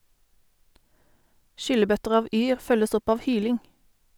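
Listening to the speech recording, nothing stood out as a technical problem anywhere along it.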